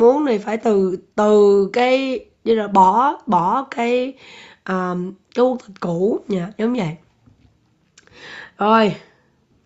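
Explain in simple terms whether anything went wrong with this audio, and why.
Nothing went wrong here.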